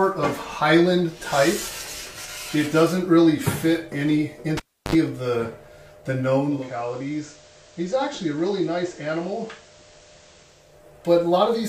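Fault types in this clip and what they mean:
Cable pulled and plugged in: a live connection is broken and remade while the signal is running. At 4.57 s a pop cuts the sound to near silence for about 330 ms. A short burst of 50 Hz mains buzz, lasting about 66 ms, follows while only the plug tip makes contact. A second pop brings the sound back by 4.95 s, marking full reinsertion of the cable.
Digital radio blending to analogue: a hybrid receiver loses its digital stream and cross-fades to the FM broadcast of the same station, then fades back. From 6.32 s the changeover takes about half a second. The level then drops by about 6 dB, and broadband hiss rises to roughly 25 dB below the signal. The analogue stretch lasts until 10.87 s, when the digital path returns.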